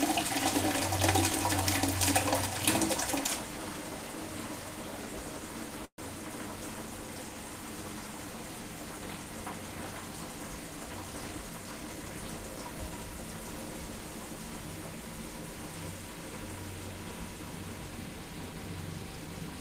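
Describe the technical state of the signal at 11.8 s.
At 11.8 s the signal is inside a jitter buffer speed-up running from 11.20 to 12.11 s. Audio had piled up in the receive buffer. The receiver trimmed short pitch-period slices repeatedly, about 150 ms in total. The sounds play at 113% speed, hurried but unchanged in pitch.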